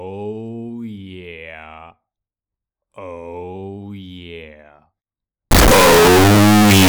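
A clip of sounds that turns to harsh, very loud distortion from 5.51 s through to the end, with the quiet bits just as loud as everything else. That's likely signed and unsigned mixed up on the 16-bit samples, so the top bit flips and each zero crossing slams across the whole range.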